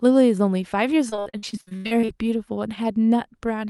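From 1.09 to 2.10 s the speech breaks up with repeated packet loss, giving a robotic sound. Audio keeps going missing in short holes, about a dozen of them. The longest runs to about 80 ms. Each hole is bridged by stretching the sound just before it, and the next hole arrives soon after. Nearly half of that second is patched-in sound rather than real signal. The result is choppy, with fragments dropped.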